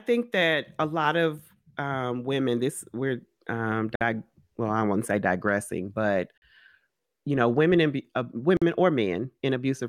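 At 3.95 s, just after "women this we're um", the speech drops out for about 55 ms before "well I won't say" resumes. It happens again at 6.38 s (44 ms, after "won't say digressing but") and at 8.57 s (48 ms, after "know women and uh"). These are gaps at a join of encoded pieces: each separately encoded piece kept its encoder start-up silence and padded final frame. On a waveform each shows as a flat, near-empty notch with smeared edges. On a spectrogram it is a thin vertical blank band, smeared at its borders.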